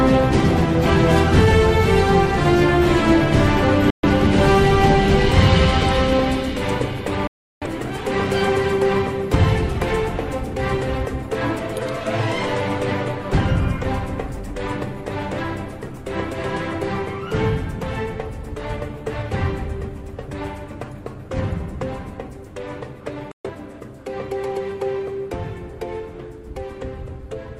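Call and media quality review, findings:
Digital broadcast dropout, 3.90–4.08 s, 7.27–7.67 s, 23.31–23.50 s. Sound snaps to silence over a 3 ms fade, returns later with content missing. Receiver muting on lost or failed-checksum frames; 128 ms and 341 ms holes fit roughly three and eight lost frames.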